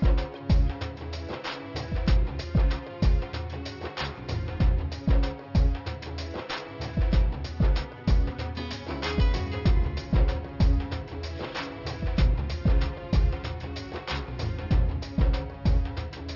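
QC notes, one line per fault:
Throughout: aliasing. Content above about 6 kHz folds back as gritty, metallic tones at unrelated pitches, about 20 dB below the signal, consistent with downsampling to 12 kHz without an anti-alias filter.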